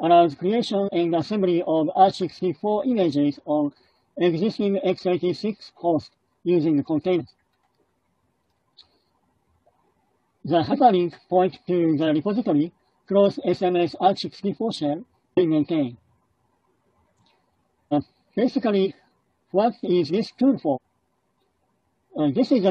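Compressed frames are skipped at 0.84, 7.16, 10.68, 12.03, 15.33, 17.88, 18.81 and 20.72 s. Whole frames go unplayed, so the sound jumps ahead by roughly 50 to 300 ms, longest near 17.9 s.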